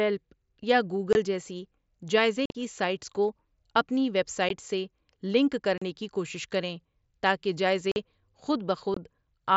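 Speech over a wideband Bluetooth headset link, with unconcealed Bluetooth headset packet loss at 1.13–1.15 s, 2.46–2.55 s, 4.49 s, 5.78–5.82 s, 7.92–7.96 s and 8.94–8.97 s. Lost voice packets were filled with silence or an idle pattern instead of being patched over, leaving abrupt holes of 15 to 45 ms with hard edges. The 2.46 s event is a scatter of drops across 90 ms that sounds rough and chopped. The mSBC codec's light graininess on loud passages sits underneath.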